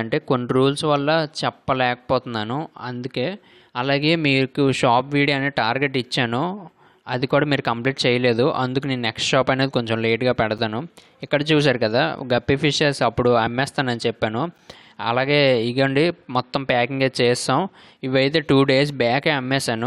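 At 10.58 s and again at 14.58 s, the time stamps of adjacent 2-second stream segments fail to meet, leaving a gap between stream segments that the player pads with silence. Each is a hard-edged hole of roughly 8 ms, lengthening the audio slightly without dropping any of it.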